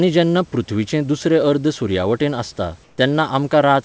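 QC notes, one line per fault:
2.84–2.98 s, comfort noise in place of the background: right after "सुर्यावटेन आसता" the room tone turns into a flat, featureless hiss for about 140 ms, roughly 2 dB quieter, likely because the sender's voice detector paused transmission and the receiver filled the gap with synthetic noise.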